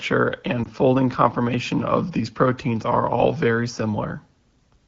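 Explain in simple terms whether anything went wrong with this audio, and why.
A short dip or warble in the speech between 0.63 and 0.67 seconds, lasting only a blink. It comes from lost AMR speech frames. Over a mobile call, speech travels in small chunks, and a radio error spoiled one of them here. The phone's decoder, which is the HD Voice (AMR wideband) kind, covered the gap by repeating the pitch and mouth shape of the previous chunk at a lower volume. The brevity points to a single lost chunk.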